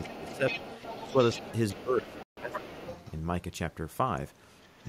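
Other side's voice leaking through, from 0.0 to 3.14 s: a second voice runs underneath the talker at roughly 15 dB below it. The talker's device is likely playing the far end on a loudspeaker, with the echo canceller failing to strip that sound from the microphone, so the far end's voice rides along in the outgoing signal.

Speech suppressed in double talk, at 0.06 to 0.64 s, 0.98 to 1.18 s, 1.35 to 1.5 s and 1.73 to 2.85 s: the talker's own voice sinks by around 10 dB in the first stretch and around 15 dB in the later ones, the last lasting about a second. With both sides speaking at once, the echo canceller likely could not tell the local voice from the loudspeaker echo and turned everything down, so the talker sounds pulled away in patches.

Bluetooth dropout, from 2.23 to 2.38 s: a hole of about 140 ms opens in the audio, and the sound then picks up further along rather than where it stopped, as if it had kept playing through the gap. 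Packets on the wireless link to the headphones likely arrived too late and were discarded, and a gap of this length fits a handful of lost packets in a row.

Other side's voice leaking through, again from 4.61 to 4.86 s: a brief, very faint trace of the far-end voice, roughly 35 dB below the speech, slips back through.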